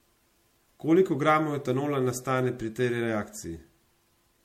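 Generation loss runs through the whole speech clip, from start to finish. The sound is swirly and hollow, with smeared consonant attacks and nothing above 16.5 kHz, more damaged than a single MP3 pass would leave. The likely cause is repeated lossy encoding, perhaps around five passes at a rate that fits 64 kbit/s. Each decode and re-encode quantises on a shifted frame grid, so the noise and spectral gaps pile up with every pass.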